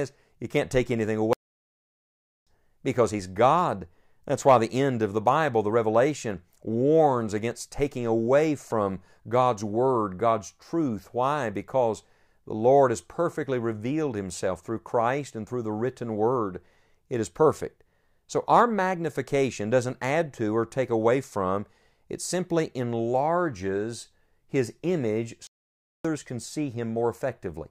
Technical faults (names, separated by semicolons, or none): playback stall